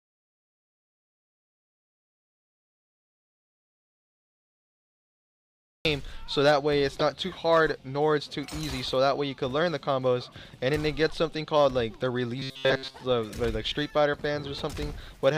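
The input was likely lost or muted while the recorder kept writing zeros, so the clip opens in an audio dropout to silence already under way, lasting until 5.85 s. That stretch is dead digital silence with no room tone, and the sound enters abruptly mid-flow.

From 6.99 to 7.02 s a corrupt frame was decoded: damaged bits in a single compressed frame were played as if valid, misplacing energy across frequencies. The result is a brief, sharp burst, a chirp-like blip about one frame long.

Between 12.37 and 12.96 s, new audio likely arrived too slowly and the playback filled the gap by looping a very short buffer, about 7.5 ms, over most of that stretch. The result is robotic sound from repeated short buffers, a rigid metallic buzz pinned at 133 Hz that only loosely follows the underlying sound.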